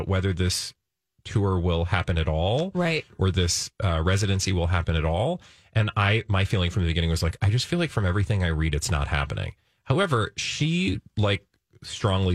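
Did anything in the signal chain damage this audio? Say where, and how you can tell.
No, nothing in the chain from capture to playback has left an audible mark on this speech recording.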